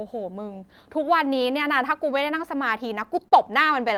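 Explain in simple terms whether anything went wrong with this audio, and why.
Near the end of this speech clip, from about 3.03 to 3.91 s, there are a handful of tiny ticks and smeared hiccups, roughly five of them, none longer than about a thirtieth of a second. These are scattered short gaps: small pieces of the audio went missing or arrived too late in transmission, and the receiver covered each hole by stretching out the sound just before it. Altogether only a small slice, well under a tenth of a second, had to be filled in this way.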